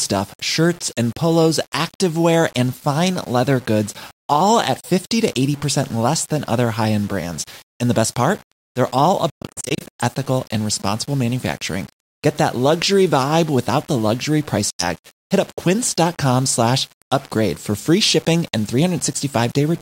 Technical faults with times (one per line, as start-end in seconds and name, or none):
0.00-19.81 low bit depth without dither
4.80-4.85 Bluetooth dropout
9.30-9.84 Bluetooth dropout
14.70-14.84 Bluetooth dropout